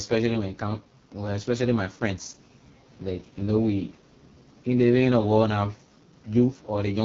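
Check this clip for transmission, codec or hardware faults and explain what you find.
The clip carries one fault, running throughout: AMR wideband (HD Voice) codec damage. Content above 6.4 kHz is synthesised noise, and nothing exists above 7 kHz. The heavy rasp and roughness on the speech fit the lowest 6.6 kbit/s mode, where the pulse-excited vocal tract model is badly starved of bits.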